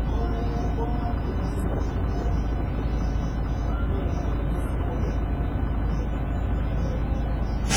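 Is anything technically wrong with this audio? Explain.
Yes. Throughout, the sound rings and smears, with a washy hiss that swells and fades with the signal and thin detail missing. This is likely WMA compression: long transform blocks spread quantisation noise over tens of milliseconds, and the heavy damage fits a starved bitrate around 24 kbps.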